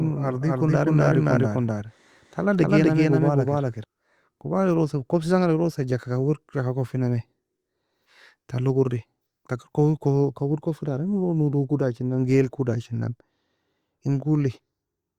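Speech, with a doubled audio track already running when the clip opens and continuing to 3.84 s. A second full-band copy of the speech trails the original by roughly 300 ms at about the same level, producing a clean, dry echo with no decay or room colouring. The copy cuts off abruptly at 3.84 s. The likely cause is the signal being captured twice, once through a slower path, or an edit that left two offset copies overlapping.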